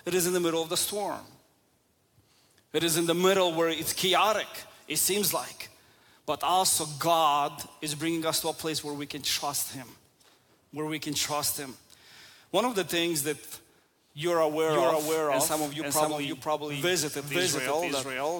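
The audio carries a doubled audio track from 14.67 s to the end. A second, full-band copy of the same sound enters abruptly and trails the original by about half a second. It plays at roughly the same level, so the two copies compete. The echo has no decay or room colour. It simply repeats. This is likely a second capture through a slower path, or an edit that left two copies out of step.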